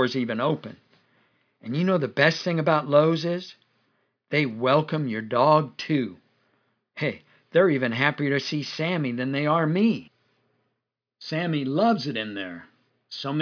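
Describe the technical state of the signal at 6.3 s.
The speech signal at 6.3 s is intact, with no audible fault at that point.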